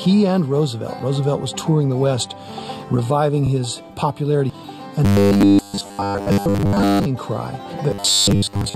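From 5.05 to 7.06 s and again from 7.91 s to the end, the sound turns into a rigid metallic buzz at 100 Hz. This is robotic sound from repeated short buffers, likely from a 10 ms block replayed while most real audio is skipped.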